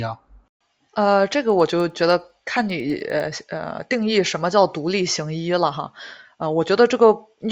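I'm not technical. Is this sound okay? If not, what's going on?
No. From 1.5 to 3.2 seconds there is a fault called a resampler restarted on every block. Behind the speech you hear a steady ticking, about ten ticks a second. The audio was converted to a different speed setting in chunks of a tenth of a second, and each chunk was handled as if it stood alone. Every seam between chunks ends up slightly wrong, and each seam sounds as a tick whenever someone is speaking.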